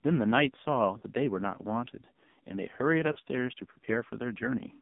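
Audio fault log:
Throughout: AMR narrowband mobile codec. The sound is confined to roughly 150 Hz to 3.7 kHz, with heavy damage: a buzzy, synthetic quality from a sparse pulse-driven vocal tract model, which fits a low AMR-NB mode around 5.9 kbps.
0.98–1.03 s and 3.12–3.19 s: lost AMR speech frames. Each gap of about 40 ms, which fits two 20 ms frames, is filled by the decoder repeating the last good pitch and vocal tract settings at falling gain, giving a brief warbling dip before recovery.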